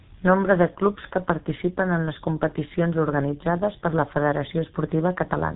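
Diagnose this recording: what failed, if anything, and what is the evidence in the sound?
The failure is at the codec stage: the speech has been through a G.723.1 codec across the whole clip, and the damage is heavy. The sound is muffled and hoarse, with consonants smeared. On a spectrogram, energy stops at a flat ceiling at 3.8 kHz with nothing above it, and harmonics look coarse and stepped. The codec rebuilds the voice from a sparse model refreshed only every 30 ms frame, at a rate that fits a roughly 6 kbit/s stream.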